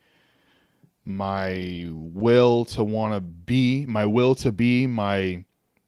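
No technical faults can be heard anywhere in the recording.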